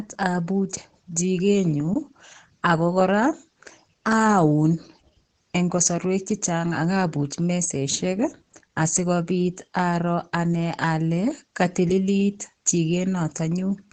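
Throughout the speech, nothing is present above 8.6 kHz, and the sound is muffled and hoarse with heavy coding damage. The cause is likely Opus compression in its SILK speech mode at wideband, which fits a bitrate near 12 kbps, where the encoder narrows bandwidth and models speech coarsely.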